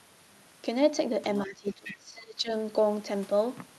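From 1.45 to 2.51 s the speech sinks, falling by roughly 20 dB at its lowest, with about a second of that span turned down. This is speech suppressed in double talk: with both ends talking at once, the echo canceller likely could not tell the near talker from loudspeaker echo and attenuated everything together.

Inside that dip, from 1.84 to 1.96 s, a brief, faint second voice slips through, sitting around 15 dB under the main speech. This is the other side's voice leaking through. The far end is playing on the near device's loudspeaker, and the echo canceller likely failed to subtract all of it from the microphone signal.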